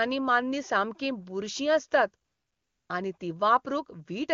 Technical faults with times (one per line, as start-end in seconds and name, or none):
2.25-2.89 AMR comfort noise
3.17-3.19 AMR comfort noise